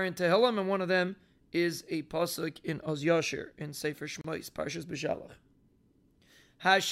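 At 4.21 to 4.24 s the speech stops for about 31 ms, a gap at a join of encoded pieces: separately encoded segments were spliced with their start delay and end padding left in. The edges are smeared by the codec, and unlike a dropout, nothing is lost; the speech resumes exactly where it stopped.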